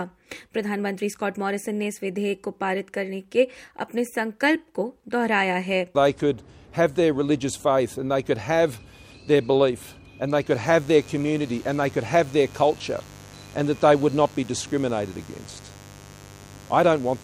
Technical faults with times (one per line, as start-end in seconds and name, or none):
10.50-17.23 mains buzz